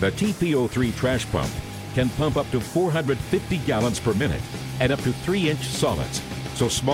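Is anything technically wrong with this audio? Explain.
No, nothing technically wrong turns up here; the audio holds together without any glitches or defects worth pointing out.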